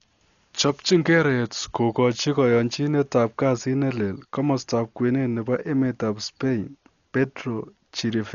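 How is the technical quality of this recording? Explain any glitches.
The speech is heavily degraded throughout: dull, with nothing above 6.9 kHz, and a rough, fluttering noise around tonal sounds. This is likely Dolby Digital compression at a starved bitrate, fitting about 48 kbps. The encoder cuts the top band and leaves many frequency lines unfilled, and the decoder pads them with noise.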